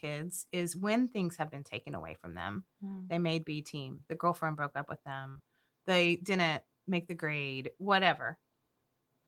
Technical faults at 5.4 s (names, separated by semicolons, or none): burst of packet loss; short concealed packet loss